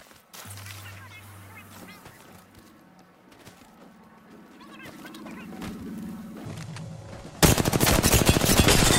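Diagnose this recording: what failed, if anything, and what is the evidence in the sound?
Nothing in this recording points to a failure at any stage of the signal chain. No event in the sound calls for a diagnosis, so there is no stage, time or mechanism to report.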